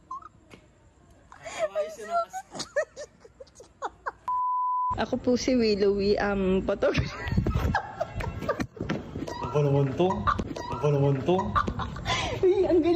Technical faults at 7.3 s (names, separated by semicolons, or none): none